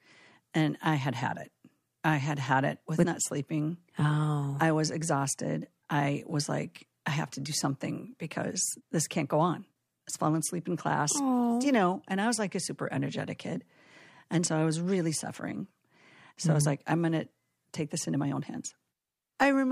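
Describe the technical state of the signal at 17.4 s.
At 17.4 s the speech signal is intact, with no technical fault at that moment.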